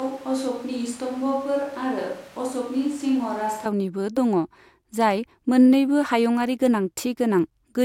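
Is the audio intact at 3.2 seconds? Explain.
No, at 3.2 s you're still in a switch to a distant microphone, running from the very start to 3.65 s. The speech sounds roomy and hollow, thinner in the bass, about 5 dB quieter, with room noise around 25 dB below it. It's likely the far mic standing in for a failed close one.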